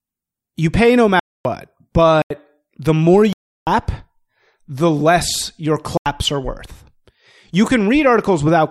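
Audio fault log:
1.20–1.45 s, 2.22–2.30 s, 3.33–3.67 s and 5.97–6.06 s, block of digital silence: the speech cuts to silence for 256, 85, 341 and 85 ms, right after "you pay no", just before "the more", and right after "the less your". Each gap starts and ends abruptly. That separates it from a fade or concealed dropout. The lengths are whole multiples of 4096 samples at 48 kHz, which points to output buffers that were not filled in time.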